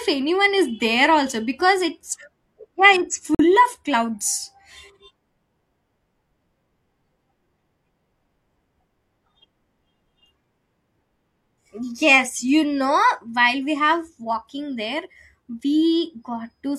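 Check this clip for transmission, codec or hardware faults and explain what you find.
One fault stands out, a corrupt frame muted. At 3.35 s the speech drops abruptly into silence for 0.1 s, until 3.45 s. A damaged compressed frame was rejected by the decoder, and silence replaced it. The gap fits a single frame. Timing stays intact afterwards.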